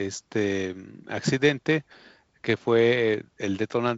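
Nothing stood out on listening to this speech clip, which comes through G.722 wideband telephone coding at 48 kbit/s with nothing above about 7.8 kHz.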